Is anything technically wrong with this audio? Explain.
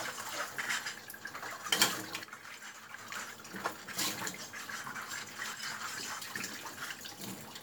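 Yes. One channel drops out twice: from 2.23 to 2.99 s, and briefly from 5.53 to 5.63 s. Both times the overall level falls abruptly by about 6 dB and then returns. The likely cause is one side of the stereo signal going silent. When the two sides are summed to mono, material shared by both keeps only half its contribution. Anything present only on the missing side vanishes completely until that channel comes back.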